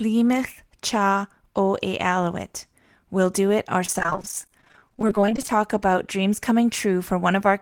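From 3.85 to 5.51 s, between "do it" and "about dreams", the speech shows repeated packet loss (robotic sound). Dozens of short dropouts, none longer than 28 ms, are each filled by extending the preceding audio, covering about a third of the stretch and giving choppy speech with pieces missing.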